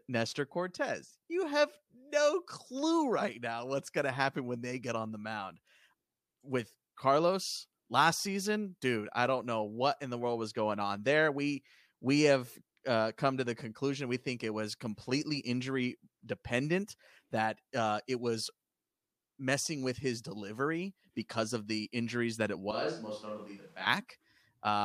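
From 22.71 to 23.87 s the speech suddenly turns hollow, roomy and a few dB quieter, with more background noise: likely a switch to a distant microphone.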